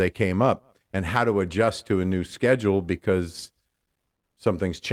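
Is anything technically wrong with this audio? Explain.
No, nothing technically wrong turns up anywhere in this speech recording.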